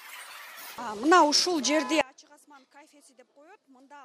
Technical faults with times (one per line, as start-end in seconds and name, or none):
2.01-4.05 audio dropout to a faint residue